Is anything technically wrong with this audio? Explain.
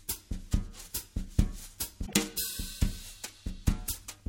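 Yes. From 2.03 to 2.14 s, damaged data in a compressed stream makes the decoder misread frames and resync, producing a brief glitch.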